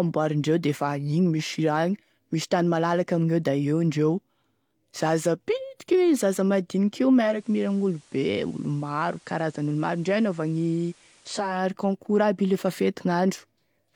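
At 7.11 s the receiver loses the digital stream and does a digital radio blending to analogue, cross-fading over about 0.4 s to the station's FM broadcast. The speech comes back on the digital signal at 11.71 s. During the FM stretch the level falls by about 2 dB and a steady hiss rises, roughly 30 dB below the speech.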